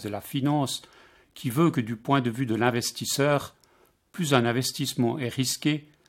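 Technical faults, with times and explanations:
5.51 s, overlap between stream segments: about 5 ms of speech is cut out where one stream segment meets the next, and the waveform jumps. Unlike a dropout, no silence replaces the missing sound. The stream was cut into 2-second segments.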